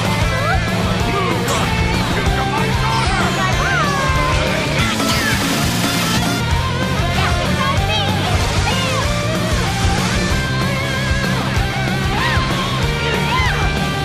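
From 4.80 s to 6.40 s the audio plays as a wrong sample rate fault. Everything runs 1.5 times too fast and rises about 7 semitones, which fits 32 kHz material played back at 48 kHz with no conversion. Speed and pitch shift together by the same ratio, which distinguishes it from a pitch shifter or time-stretch, where one changes without the other. The passage sounds high and hurried, then snaps back.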